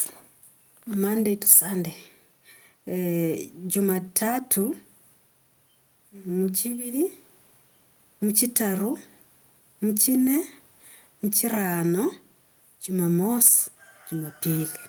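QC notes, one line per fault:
Throughout: gain pumping. The gain swings by about 5 dB, so loud and quiet passages sit unnaturally close in level and the speech sounds squashed. This is likely a fast compressor or limiter reacting to excessive microphone gain. Unlike a noise gate, the room noise, about 45 dB below the speech, never cuts out.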